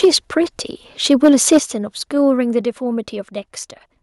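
A speech clip with harsh, crackling peaks and sudden drops in level. Microphone overload appears from 0.03 to 0.06 s, about 3 dB over, with roughly 15% of samples flattened. It returns from 1.1 to 1.58 s, about 4 dB over, clipping fewer samples. The likely cause is input volume set too high, so peak tops hit the converter's limit. Microphone volume stepped down at 0.05 s by 2 dB, at 1.59 s by 7 dB, and at 2.61 s by 4 dB. Voice and background fall together each time. This likely comes from call software cutting the input gain in one step.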